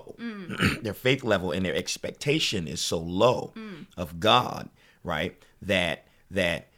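At 1.79 s the speech has a block of digital silence. For about 0.84 ms the sound drops straight to silence and then returns, with no fade either way. The two hard edges sit so close together that they merge into a single sharp tick.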